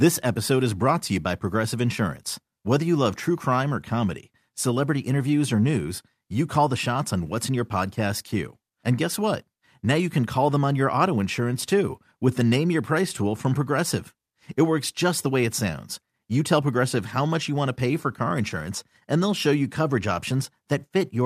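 A stretch of speech with nothing technically wrong to point out anywhere along the way.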